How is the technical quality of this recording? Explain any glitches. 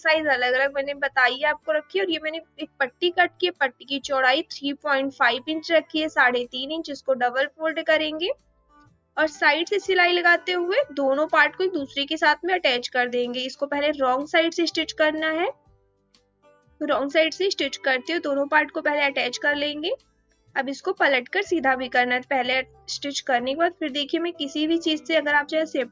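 The recording is compromised by a speech noise suppressor working on sound it wasn't built for. It came through call microphone processing, with nothing above 8 kHz.

Throughout, the noise suppressor applied to music or sounds treats steady, sustained material as noise. It keeps pulling the level down and letting it back up, a swing of around 10 dB. Attacks survive. Held parts and tails sag, so the sound pumps and thins.

Seven times, sound is cut by the noise suppressor: 1.58–1.95 s, 2.25–3.02 s, 3.29–3.90 s, 8.35–9.17 s, 15.53–16.80 s, 19.97–20.55 s and 22.65–22.88 s. Each time, the sound is mistaken for noise. It dips by about 17 to 19 dB, or about 10 dB at 22.65 s.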